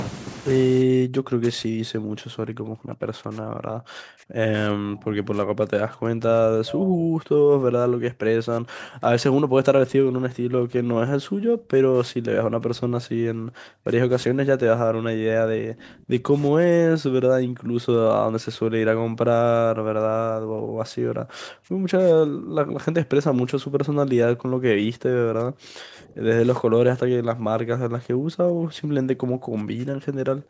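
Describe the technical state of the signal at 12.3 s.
At 12.3 s you're inside a stretch of speech suppressed in double talk that runs from about 4.73 s to 14.11 s, close to ten seconds in all. The talker dips and breaks up, at worst falling by about 40 dB, the kind of gating you get when the likely cause is an echo canceller that can't separate the near talker from loudspeaker echo and ducks both. The band still tops out at 8 kHz from the call's microphone processing.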